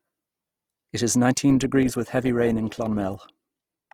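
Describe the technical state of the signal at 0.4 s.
At 0.4 s the signal is intact, with no dropout, distortion, glitch or other fault present at that moment.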